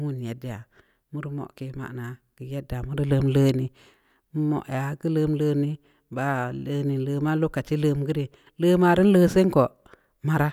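No technical faults are audible.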